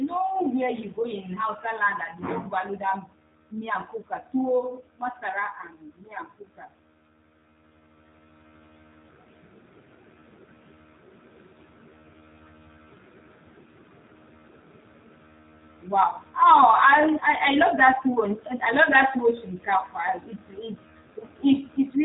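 From start to finish the speech carries G.729 codec damage. Each 10 ms frame is rebuilt from a vocal tract filter, a pitch predictor and a few pulses, so it sounds rough and synthetic, with nothing above 3.8 kHz, which fits an 8 kbit/s VoIP link.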